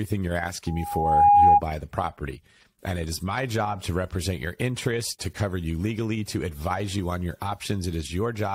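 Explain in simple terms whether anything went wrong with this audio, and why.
A high, steady whistle rises out of the speech at 0.67 s, swells over about half a second until it is much louder than the talking, and cuts off at 1.61 s, just before "the property". This is loudspeaker feedback squeal: the microphone picked up the loudspeaker it was feeding, and one pitch, around 817 Hz, kept going round that loop, growing louder each pass.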